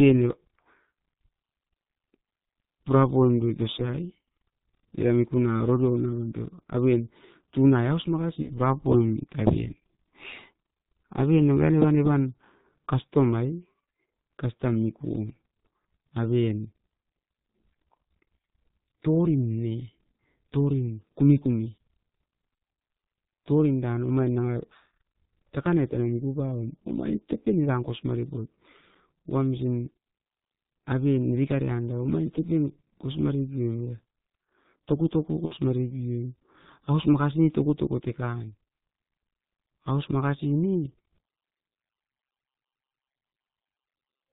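The whole recording has passed through the G.723.1 codec, whose heavy compression, consistent with its 6.3 kbit/s mode, discards everything above 4 kHz and refreshes its model of the vocal tract only every 30 ms. The speech comes out muffled and hoarse. Consonants are smeared because the codec's slow updates cannot keep pace with their rapid changes.

Packet loss concealed by the speech codec strikes at 8.42 to 8.50 s, a gap that fits one missing 30 ms frame. The decoder bridges it by repeating its last pitch and filter at falling gain, so the sound briefly smears into a buzzy tone or coloured noise that fades, and stays weak for a moment after the stream resumes. The same concealment recurs at 35.45 to 35.54 s. That gap sounds like about two consecutive frames, 60 ms, were lost, so the extrapolation lasts longer and fades further before normal decoding recovers.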